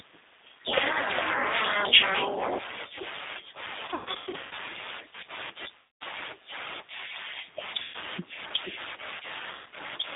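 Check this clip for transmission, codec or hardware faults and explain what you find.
Yes, there's a fair bit going on: the whole thing has passed through a low-rate speech codec, and there are four stretches of packet loss on top of that.

G.729 codec, throughout: the sound sits in a narrow 250 Hz to 3.7 kHz band, with nothing up top. The roughness and slightly synthetic edge fit G.729 at 8 kbit/s, which models the voice from a filter, a pitch predictor and a few pulses per frame.

VoIP packet loss concealed by the speech codec, at 3.85 to 4.53 s, 5.77 to 6.03 s, 7.82 to 7.96 s and 9.51 to 9.67 s. The first is the worst, with about 420 ms missing in bursts over 660 ms and the longest gap 120 ms. The others run 240, 120 and 150 ms. Each time, the decoder keeps guessing from its last pitch and filter and turns down the gain, so the speech smears into a fading buzz or coloured noise. Because every frame builds on the one before, it stays weak for a moment after the packets return.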